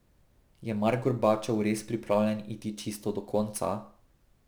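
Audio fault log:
Throughout: crude rate conversion. Samples were dropped or repeated with no filtering, in a pattern consistent with a 48 kHz to 44.1 kHz change, so periodic errors about 30 dB below the speech add a gritty, inharmonic fizz that tracks loud and bright sounds.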